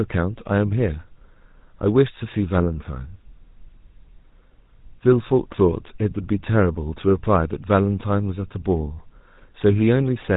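Speech passes through a GSM full-rate codec throughout, cut off above 3.8 kHz, with a plainly audible buzzy, gravelly roughness that fits a 13 kbit/s pulse-excited coder, unlike cleaner narrowband telephone coding.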